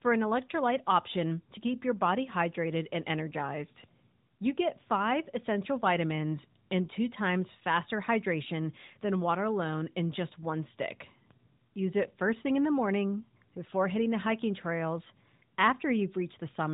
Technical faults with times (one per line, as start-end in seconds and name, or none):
none